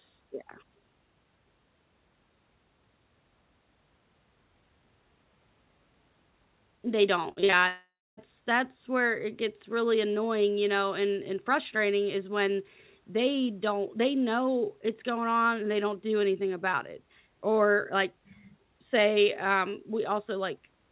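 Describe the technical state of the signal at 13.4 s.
At 13.4 s the speech is intact, with nothing present above 4 kHz as expected for a call path using the G.711 mu-law codec at 64 kbps.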